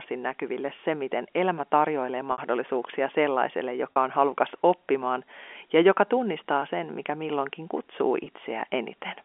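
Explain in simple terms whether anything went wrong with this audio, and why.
The speech has five short dropouts caused by packet loss with pitch repetition. They fall at 0.76 to 0.78 s, 2.32 to 2.38 s, 3.93 to 3.96 s, 6.60 to 6.62 s, and 8.24 to 8.26 s. Each time, part of the stream never arrived. The receiver filled the hole by replaying the last small cycle of the voice. The 20 ms gaps sound like a tiny buzzy hold. The 40 ms gap lasts a bit longer. The 60 ms gap fits three lost packets, so the repeat fades out before the speech returns. All of this comes through a telephone line that carries nothing above 3.4 kHz.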